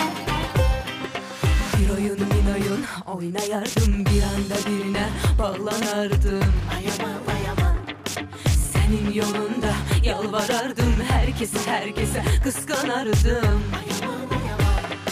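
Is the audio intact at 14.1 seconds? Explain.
Yes, the audio is intact at 14.1 seconds, with nothing there to interrupt or degrade the sound.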